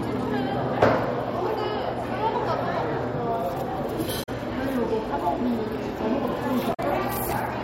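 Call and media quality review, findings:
Damaged data in compressed stream, 4.19–4.29 s and 6.70–6.80 s: brief chirp, squawk, click or short hole, about 0.1 s each. Decoder misreads corrupt frames, loses sync, resyncs on next header. Spectrogram: broadband smear or blocky patch; waveform: abrupt discontinuity at each edge.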